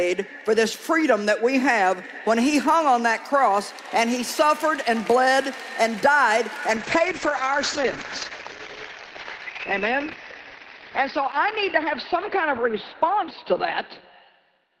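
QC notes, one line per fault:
6.77 s to end, call bitrate drop: the encoder falls back to far fewer bits, which fits a cut from about 64 kbps to about 9 kbps, and the audio band narrows from 20 kHz to 6 kHz. Coarser coding makes the sound rough and muffled, and it stays at its poorest for 5.83 s without recovering.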